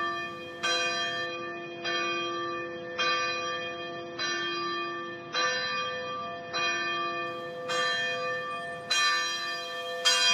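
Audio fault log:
1.26–7.26 s, adaptive stream at a lower bitrate: the top end abruptly disappears, with nothing above about 6.3 kHz, and what remains takes on a smeared, watery codec texture. There is no gap at either edge. Quality simply steps down and, six seconds later, steps back up. The stream switched to a leaner rendition while the connection struggled, consistent with AAC moving from around 96 kbit/s to 24 kbit/s, where the encoder discards treble to save bits.
8.91–10.33 s, pre-emphasis left on: the sound turns thin, glassy and hissy through to the end, with high frequencies standing about 11 dB above the midrange at 10 kHz relative to 1 kHz. The treble boost applied for transmission never received its matching de-emphasis cut on playback, so the lift remains in the output. Its shape fits a J.17 curve, which rises steadily across the upper range.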